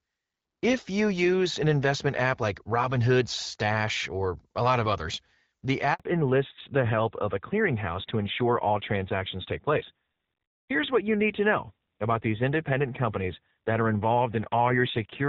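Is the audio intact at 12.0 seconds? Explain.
No. At 12.0 s the call is in a fallback to narrowband, running from 6.00 s to the end. Wideband coding gives way to a narrowband codec. Nothing above 4 kHz survives, so the sound turns dull and rough, fitting AMR-NB near 7.4 kbit/s.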